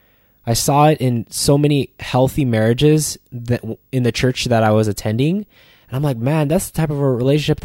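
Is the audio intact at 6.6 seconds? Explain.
No, video or display buzz runs throughout, including 6.6 s. A nearby screen couples a faint 50 Hz field-rate buzz and a 15.6 kHz line tone into the speech, far below it. A spectrogram shows a steady 50 Hz harmonic ladder and a thin line at 15.6 kHz.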